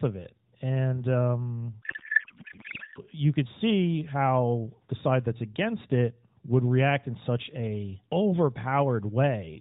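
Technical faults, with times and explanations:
1.82–2.99 s, codec payload misread: the AMR frames were packed octet-aligned but unpacked as bandwidth-efficient, so every field landed in the wrong bits. The narrowband speech gives way to garbled noise and warble that barely tracks it, until the unpacking matches again.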